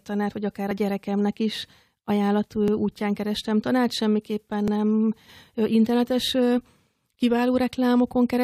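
Speech clip with overlap between stream segments: timestamps of adjoining 2-second segments overlap, so the player trims sound that was never duplicated, and the waveform jumps. Tiny clicks or skips land at 0.71 s (after "tanárt vagy akár a"), 2.68 s (after "a gyerekemnek is ajánlat") and 4.68 s (after "kerestem tanárt semmiképpen").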